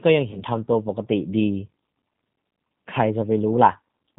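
Speech runs through the G.729 codec for the whole clip, which points to the 8 kbit/s G.729A variant. It leaves plainly audible damage: nothing above 4 kHz, with a rough, synthetic edge from rebuilding the voice out of a filter, pitch predictor and a few pulses per frame. VoIP packet loss concealed by the speech codec occurs from 0.31 to 0.43 s. About 20 ms of audio is missing, which fits a single lost packet. The decoder stretches its last pitch and filter into a buzzy tone or coloured noise that fades, and the voice stays weakened until about 0.43 s as later frames recover.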